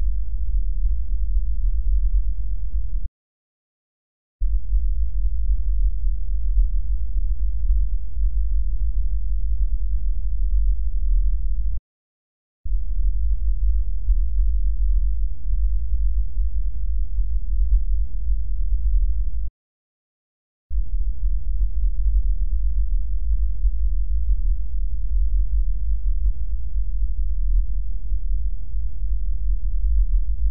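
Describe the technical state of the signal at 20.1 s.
Playback stall, 19.47 to 20.72 s: the sound goes silent for 1.22 s mid-flow, likely because the player ran out of data or its thread was blocked.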